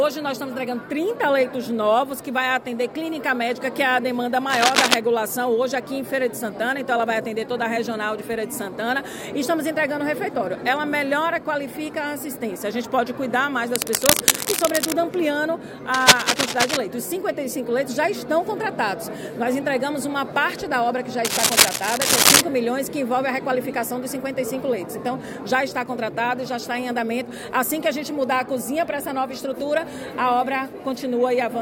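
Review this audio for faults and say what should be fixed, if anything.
Cable scratch noise at 4.50–4.94, 13.74–14.93, 15.94–16.77 and 21.25–22.41 s: dense, uneven rustling bursts as loud as the sound or louder, likely from a worn connector's contact resistance jumping. Replace or reseat the suspect cable and connectors, and keep leads still while recording.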